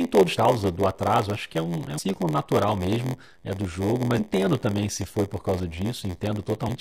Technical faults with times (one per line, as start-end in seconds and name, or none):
0.00-6.80 block size mismatch (padded)
0.36 damaged data in a compressed stream
1.97 damaged data in a compressed stream
4.17-4.20 damaged data in a compressed stream
6.67 damaged data in a compressed stream